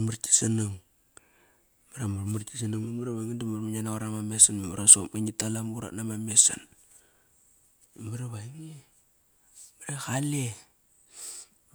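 No technical faults are audible.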